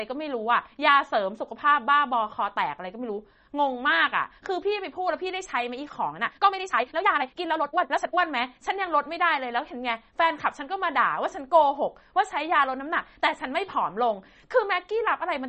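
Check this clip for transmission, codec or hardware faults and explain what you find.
Two faults are audible. Throughout, the speech sounds watery and swirly with nothing above 8.3 kHz, likely MP3 compression at a low bitrate near 32 kbps. On a spectrogram this appears as a flat ceiling with flickering high bins.

From 6.09 to 8.19 s, the pace jumps to 1.63 times speed at unchanged pitch, likely a time-stretched section that drops short pieces. It sounds rushed, and the waveform shows compressed syllable spacing.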